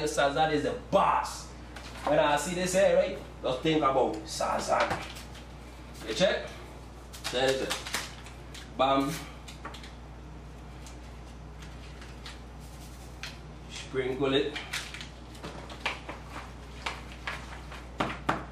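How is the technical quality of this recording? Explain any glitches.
The recording has one clear fault: mains hum from start to finish. A steady low tone sits at 60 Hz under the whole clip. It comes from the power line leaking into the signal path, most often through a ground loop or a nearby transformer. The hum is loud, roughly 15 dB below the wanted sound. It is heard as a constant drone that never changes with the audio. It muddies the low end.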